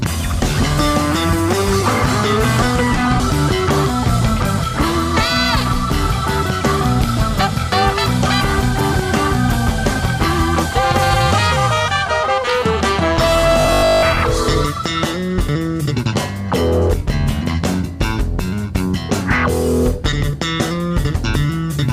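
Right at the start, around 0.04 s, there's a quick glitch, and the same thing turns up again at 3.20 s and 7.72 s. That's damaged data in a compressed stream. Some bytes in the file or stream got lost or scrambled, so the decoder couldn't make sense of those frames, dropped sync, and hunted for the next frame header.

From 13.61 to 14.03 s the sound goes hard and metallic, with a fixed buzz at 50 Hz riding on it. That's robotic sound from repeated short buffers, and it's likely caused by audio arriving too slowly. The player keeps looping the last 20 ms or so to fill the gap, and that loop length is what sets the 50 Hz pitch. Most of that stretch is repeats rather than fresh audio, so it only loosely follows what's underneath.

At 15.49 s there's one more of those compressed-stream glitches, like the earlier ones.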